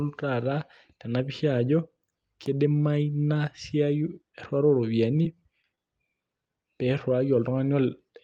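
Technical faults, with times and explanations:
5.23–5.36 s and 5.62–5.65 s, short concealed packet loss: in each, about 20 ms of the speech never arrived, and the decoder bridged the hole with 16 to 18 ms of invented sound. It carried the last pitch forward, or shaped noise where the sound was unvoiced, then crossfaded back into the real signal. The first also runs slightly long. Unlike a stall, real speech is gone, so the result is a brief smear or wobble, not a held one.
5.75–5.80 s, short stall from a late packet: here a packet arrived late rather than lost, so the jitter buffer ran dry and the receiver stretched the current sound for about 23 ms until the packet turned up, then resumed exactly where it stopped. Nothing is missing, which sets it apart from the concealed losses just before it. What you hear is a sound held a fraction too long, with a faint buzz or dip, and everything after it shifted later by that 23 ms.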